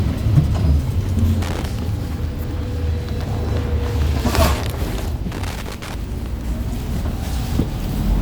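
At 1.42 to 1.66 s, and again for longer at 5.32 to 5.94 s, there's loose connector crackle: a worn or dirty contact keeps making and breaking, chopping the signal, so you get an irregular burst of scratchy crackle over the sounds.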